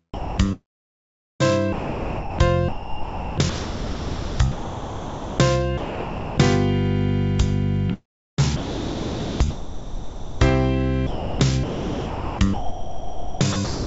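From 0.14 to 1.43 s the sound is chopped by the voice detector. It breaks up repeatedly, and about 1.1 s of it is swapped for hiss. The likely cause is a sender-side detector gating quiet passages and sending comfort noise instead.

From 1.73 to 2.39 s the sound is dropped by the voice detector. It gives way entirely to steady noise for 0.66 s, then returns. This is likely the detector taking a soft passage for background.

From 2.69 to 5.39 s the choppy gating returns. About 2.5 s of the stretch is filled with synthetic noise. The sound stutters in and out, likely from the detector switching on and off repeatedly.

From 5.78 to 6.38 s the sound drops out again, replaced by 0.6 s of steady noise. The likely cause is again the detector stopping transmission.

From 7.94 to 10.41 s the sound is chopped again, with about 2.2 s replaced. It flickers between the real signal and comfort noise, likely the same gating.

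From 11.07 s to the end the chopping continues, with about 2.2 s lost to filler. The likely cause is the detector gating the quiet parts.

Throughout, the call path cuts everything above 8 kHz, which fits a 64 kbps G.722 link.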